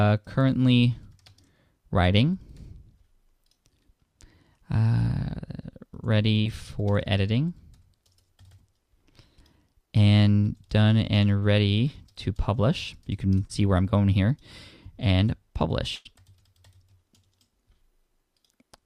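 Brief smears or wobbles at 6.41, 11.39 and 13.47 s are short concealed packet loss: 20 to 40 ms went missing and the receiver extended the preceding sound. At 15.95 to 16.07 s, a held buzz or fading hiss is a burst of packet loss: about 100 ms never arrived, so the last sound was continued and faded.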